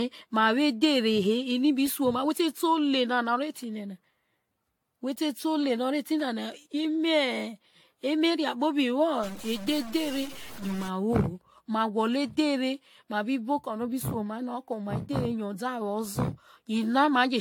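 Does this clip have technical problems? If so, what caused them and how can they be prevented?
Yes. Throughout the speech there is generation loss, likely from about seven rounds of AAC-LC encoding at 96 kbit/s. Each re-encode quantises on a shifted frame grid, so swirl, hollowness and blurred attacks build up beyond what one 96 kbit/s pass would cause, with nothing above 18.7 kHz. Keep a lossless master and encode once.

From 9.24 to 10.88 s a stuck bit, likely from a failing data line or converter, adds distortion that follows the waveform. Unlike clipping, it also fills quiet moments with noise rather than only flattening peaks. Check cabling and converters, and monitor bit activity.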